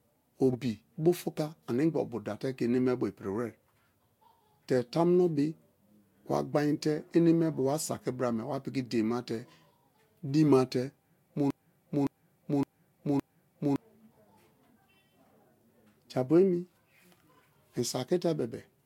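Corrupt frame decoded at 0.52 to 0.56 s, just before "bu fuka animgba obuda": one damaged compressed frame played anyway, giving a brief noisy blip peaking around -25 dBFS.

Broken-record loop from 11.50 to 13.76 s: a 0.56 s fragment repeats four times back to back, likely from a stalled stream resending its last buffer, losing the intended audio.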